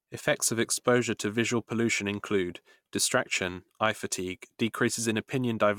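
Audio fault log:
No faults can be heard anywhere in this speech recording. There is nothing to list against any time in the log.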